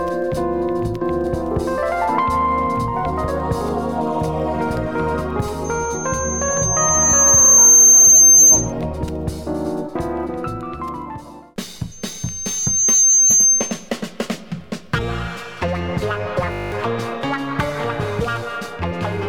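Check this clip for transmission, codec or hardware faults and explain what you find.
Two kinds of fault are present: loudspeaker feedback squeal on two occasions and a brief system hang loop near the end.

From 5.64 to 8.73 s a thin, piercing whistle at 6.3 kHz swells over roughly two seconds until it sits about 15 dB above the program sound. It returns from 11.91 to 13.90 s, rising faster, in about a second, and peaking lower, about 10 dB above the sound. This is loudspeaker feedback squeal. A microphone is hearing the loudspeaker it drives, and around 6.3 kHz the loop gain tops unity, so that single frequency keeps amplifying itself until the loop is broken.

From 16.52 to 16.72 s the audio collapses into a rough, steady 50 Hz buzz. This is a system hang loop. The computer or driver stalled while the sound hardware kept replaying the same 20 ms slice of its ring buffer, which fits a buffer of that length. 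It repeats about ten times, so roughly a fifth of a second of real audio is replaced by this mechanical drone.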